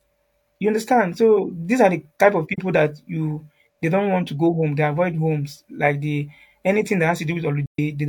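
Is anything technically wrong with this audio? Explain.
Yes. The speech has two soft dropouts from AAC frame loss with muting. The first comes at 2.53 s, right after "are the type of", and lasts about 43 ms, which fits one lost frame. The second is at 7.66 s, after "the anything that", and lasts about 130 ms, which fits three lost frames. The decoder filled the missing frames with silence. Its overlapping windows fade the sound out and back in, leaving smooth-edged gaps.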